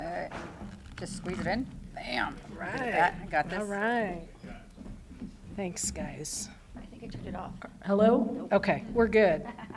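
From 0.0 to 5.24 s, a resampler restarted on every block converts 48 kHz to 24 kHz in 40 ms pieces, leaving edge errors heard as a 25 Hz buzz under the sound.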